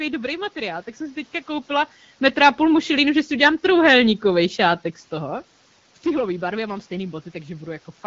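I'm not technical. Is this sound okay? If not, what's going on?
Yes, nothing here sounds wrong.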